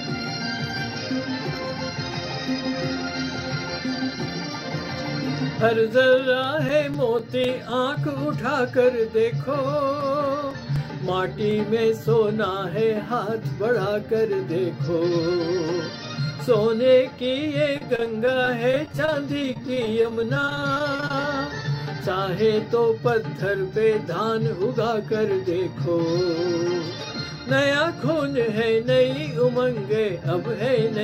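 A scratch or blemish on the disc destroys more data than the player's error correction can rebuild, so the damaged spot is hit once per revolution and the player patches or mutes those samples. The result is CD scratch ticks: from 5.93 to 7.94 s, a steady run of about four or five small clicks per second, each lasting only a few milliseconds, and again from 9.75 to 11.51 s with a similar train of slightly shorter ticks.

From 17.45 to 21.24 s, repeated packet loss means that audio packets go missing or arrive too late, dozens of times in quick succession. Each hole is filled by stretching the sound that came just before it, and the next hole arrives soon after, so the passage turns choppy and robotic. The holes total roughly half a second, the longest is 31 ms, and about 13% of the stretch is concealed rather than real.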